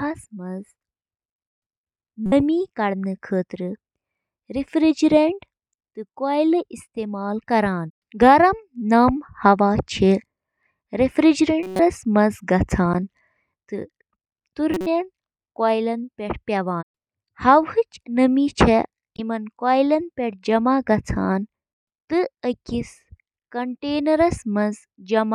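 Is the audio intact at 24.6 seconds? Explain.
Yes, at 24.6 seconds the speech plays through intact, with no dropout, click, distortion or other fault to be heard at that moment.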